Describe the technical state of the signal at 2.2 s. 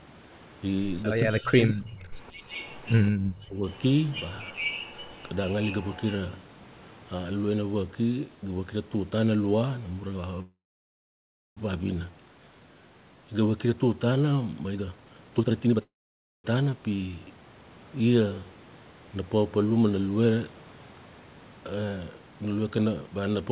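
Right around there the speech has just come back from a dip between 1.21 and 2.12 s, where it sinks very deep, close to gone, for most of a second. That's speech suppressed in double talk, likely the echo canceller mistaking the near talker for loudspeaker echo while both sides spoke, and pulling everything down.

Then at 2.23 to 2.27 s there's a tiny, very faint echo leak, a quick scrap of the voice returning about 175 ms late. It's likely the far end's canceller letting a bit of loudspeaker pickup slip back through.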